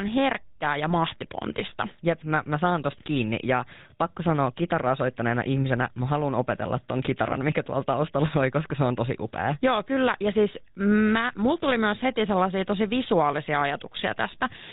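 GSM full-rate codec damage runs throughout: sparse regular-pulse excitation makes the speech plainly buzzy and gravelly, and nothing passes above 4 kHz, which fits 13 kbit/s coding.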